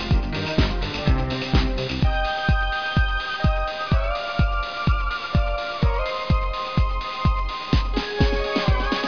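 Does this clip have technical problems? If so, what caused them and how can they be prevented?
Yes, there's aliasing throughout. It sounds like a downsample to about 11 kHz with no anti-alias filter, so content above the 5.5 kHz fold got mirrored back as gritty, metallic tones that sit fairly close under the main sound. To prevent it, low-pass filter below half the target rate before resampling.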